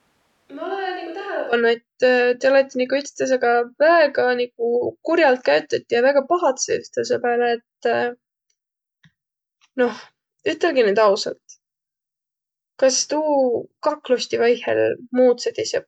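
From the start to 1.53 s, speech is roomy, hollow and thin, about 10 dB quieter with more room noise, then snaps to close sound: likely a switch to a distant microphone, not added reverb.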